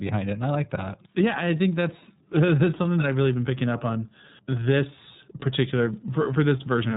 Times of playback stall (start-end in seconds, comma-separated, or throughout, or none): none